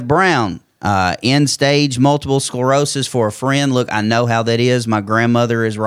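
No technical faults are audible anywhere in this recording.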